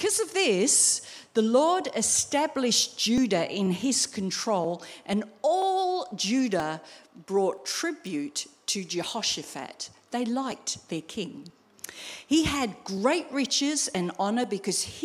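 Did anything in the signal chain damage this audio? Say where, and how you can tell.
Yes: periodic USB or driver dropouts at the driver/buffer stage. Something stalls the bus every 0.49 s from 3.18 s to 14.93 s, and about thirty chunks of roughly 10 ms are skipped outright, so the sound jumps forward with an evenly spaced tick wherever signal is present.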